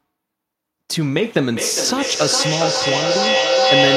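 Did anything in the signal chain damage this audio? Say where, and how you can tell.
Yes. From 1.52 s to the end, a feedback howl rises to about 5 dB above the speech, narrowing to a tone near 500 Hz and pulsing roughly every 0.4 s. A microphone-to-loudspeaker loop is gaining level each pass. Unlike echo, the repeats grow rather than fade.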